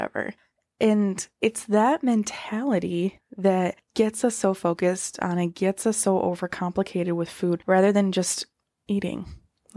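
Nothing in the recording of speech points to a technical problem: the signal holds steady throughout, with no audible interruption, distortion or level disturbance at any point.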